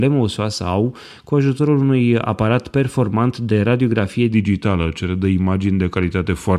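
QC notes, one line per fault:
4.33–6.59 s wrong sample rate: after "aparat performant de radiografie" speech slows to 0.92× and drops 1.47 semitones, fitting 48 kHz played at 44.1 kHz; harmonics shift down, waveform stretches.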